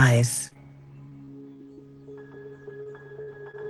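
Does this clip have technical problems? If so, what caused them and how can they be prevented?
Yes. The sound has three kinds of network fault, all from audio arriving too late or not at all.

Short concealed packet loss appears at 0.47 to 0.53 s, again immediately at 0.53 to 0.57 s, then at 2.83 to 2.87 s and 3.51 to 3.55 s. About 40 ms is missing in the first and 20 ms in each of the others. The receiver bridges each hole by extending the preceding sound, leaving a brief smear or wobble. Unlike a burst, each gap is too short to fade into a held buzz. Forward error correction and a slightly deeper jitter buffer would let the receiver recover or wait for these packets.

Repeated packet loss gives a robotic sound from 1.09 to 1.79 s. Four separate gaps fall close together, the longest 30 ms, so about 13% of that stretch is patched. What sets it apart from isolated losses is the clustering: rapid successive patches make the sound choppy instead of smearing it once. 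A steadier connection, such as wired instead of congested Wi-Fi, or prioritised audio traffic would prevent it.

A burst of packet loss at 3.21 to 3.29 s removes about 60 ms in one run. The last sound is continued and turned down as the gap goes on, so it becomes a held buzz or a fading hiss before the audio resumes further along. That audible decay is what distinguishes it from the brief single losses. Redundant encoding spread across packets, with enough buffering to absorb a short outage, would cover a gap of this length.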